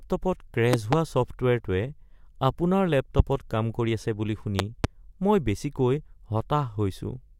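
Speech with loud pops: double pops at 0.73–0.95 s and 4.59–4.87 s (after "কৰি আছে বুলি"), and one at 3.19–3.22 s. Each peaks roughly 20 dB above the speech. A likely cause is a voltage spike from a plug, switch or static.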